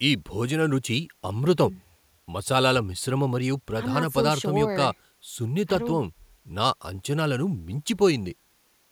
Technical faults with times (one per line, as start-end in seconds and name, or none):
none